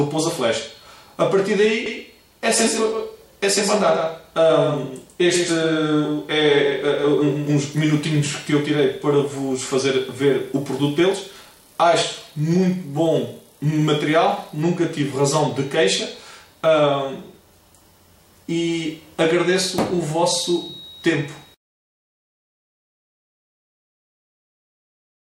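From 1.86 s to 7.50 s a doubled audio track appears: a full-band copy trails around 150 ms behind, about 5 dB quieter, likely a second out-of-step capture. Unlike echo, the copy has no decay or room colour and cuts in and out abruptly.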